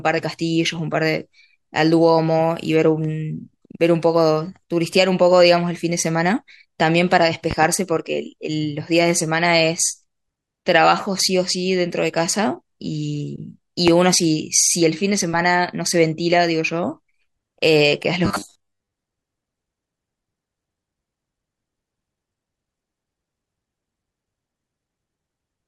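At 7.51 to 7.67 s there's a loud pop, really two in quick succession, about 10 dB over the speech, then a single harder one about 15 dB up at 13.88 to 13.91 s. Both are likely voltage spikes from a plug, switch or static.

From 18.25 to 18.91 s you get robotic sound from repeated short buffers: a stiff, metallic 100 Hz buzz, likely from 10 ms chunks looping while most of the real audio is dropped.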